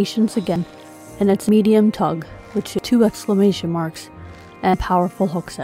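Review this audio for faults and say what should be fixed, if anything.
At 0.56, 1.49, 2.79 and 4.74 s the sound jumps ahead, losing about 0.1 s at the first two and about 0.2 s at the last two. This is likely a dropped buffer (overrun), with unread samples overwritten. Prevent it with larger buffers and higher capture-thread priority.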